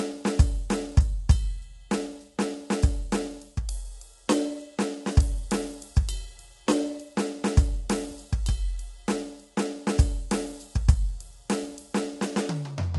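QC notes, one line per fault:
Throughout, low-delay AAC compression: the music carries plainly audible codec damage, with a rough, grainy texture and noise filling the gaps between harmonics, and nothing above 11.6 kHz. This is likely AAC-ELD, the low-delay AAC used in video calls, whose short frames of about 10 ms resolve harmonics poorly and spend bits inefficiently. The depth of the damage points to a low bitrate, around 32 kbps, forcing coarse quantisation and a hard top-band cut.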